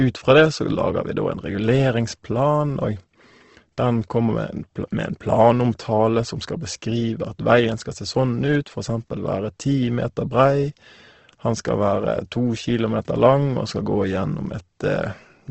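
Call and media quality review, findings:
Speech grainy and rough throughout, nothing above 8.2 kHz. Likely Opus compression, CELT mode. Starved bands noise-filled, which fits about 16 kbps.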